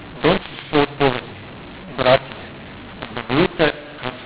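From start to finish, speech that was encoded with G.711 A-law is being decoded as mu-law, so every 8-bit code is mapped back through the wrong logarithmic curve. The sample levels come out scrambled: some too loud, others too soft, and the quietest values pushed well above silence. The speech sounds harsh and gritty, and the gaps between phrases fill with a noisy hiss. The telephone band itself stops near 4 kHz, which fits 8 kHz sampling.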